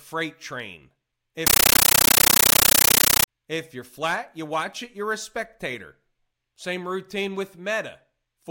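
From 1.47 to 3.28 s the speech gives way to a compressed stream played as audio. An undecoded AC-3 bitstream, which fits a 640 kbps encode, is treated as samples. The result is loud chattering static: 13.3 ms noise bursts repeating 31.25 times a second. These appear as dense blocks separated by flat gaps in the waveform, and as broadband vertical stripes on a spectrogram.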